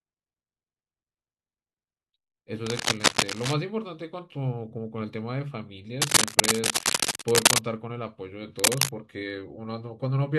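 Speech with cable scratch noise in three bursts, from 2.66 to 3.54 s, 6.0 to 7.6 s and 8.59 to 8.90 s. Dense, ragged scratching rides over the voice, roughly 5 dB above it in the first burst and roughly 10 dB above in the later two. The likely cause is a worn cable or connector being moved, its contact resistance jumping rapidly. Unlike isolated clicks or crackle, the noise here is dense and rustling.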